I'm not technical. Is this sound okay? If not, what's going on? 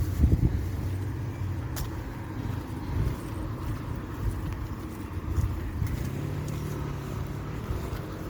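No. Throughout, the sound is swirly, smeared and hollow, with blurred attacks. This is generation loss, likely from being saved as MP3 about seven times over.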